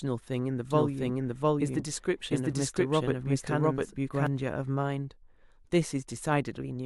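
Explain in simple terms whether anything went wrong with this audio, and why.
A doubled audio track from 0.71 to 4.27 s: an equally loud copy trails about 0.7 seconds behind, likely from the sound being captured twice.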